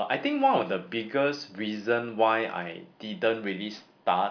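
Speech recording, no technical faults detected anywhere in the clip.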